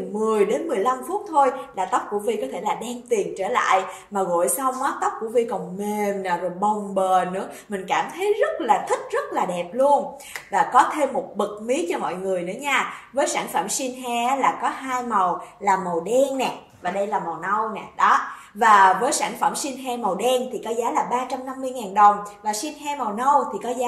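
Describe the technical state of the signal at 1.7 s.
At 1.7 s the signal is intact, with no audible fault at that point.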